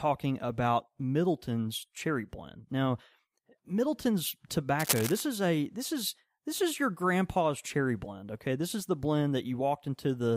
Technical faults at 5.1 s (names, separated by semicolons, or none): cable scratch noise